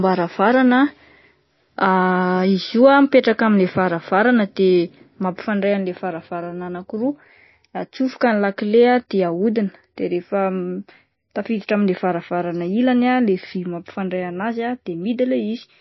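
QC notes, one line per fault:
Throughout, MP3 compression: the speech was likely passed through a starved MP3 encoder, at a level that fits a bitrate near 26 kbps. It removed everything above 5.8 kHz and let weak frequency lines drop in and out between frames. The result is dull, watery, swirly sound with plainly audible damage.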